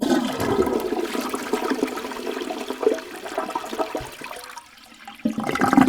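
Sound recording with no audible technical faults.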